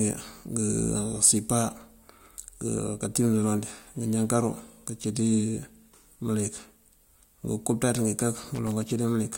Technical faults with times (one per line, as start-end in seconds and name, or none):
8.37-8.72 loose connector crackle